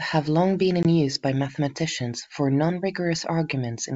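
A speech clip carried over G.722 wideband telephone coding has a brief hard-edged gap from 0.83 to 0.86 s, between "long been" and "use by mathematicians for", where the sound drops to silence and comes back slightly distorted. This is packet loss on an ADPCM call: a couple of packets, about 20 ms of audio, went missing and were filled with silence. The decoder's adaptive predictor and step size then no longer matched the sender's, so the returning speech was briefly distorted until the two drifted back into step.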